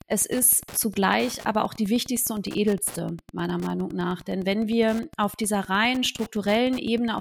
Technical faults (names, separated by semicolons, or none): Wi-Fi interference